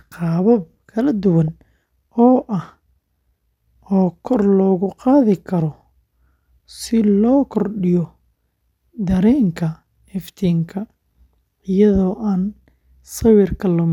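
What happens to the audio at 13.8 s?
At 13.8 s the speech carries on intact, with no dropout, click or distortion at that point.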